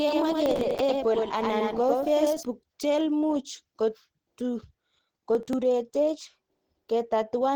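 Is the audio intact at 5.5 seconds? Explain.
No. Processor overload crackle runs from 5.35 to 5.53 s: the system misses roughly five buffers of about 10 ms each over that stretch, skipping them and leaving a gritty burst of crackle. Throughout, the sound is also muffled and hoarse, likely Opus compression in its hybrid speech mode at a low bitrate, which fits a rate around 16 kbps.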